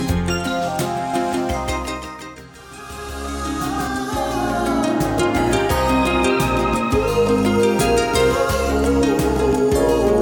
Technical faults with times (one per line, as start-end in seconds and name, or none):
1.13-3.87 doubled audio track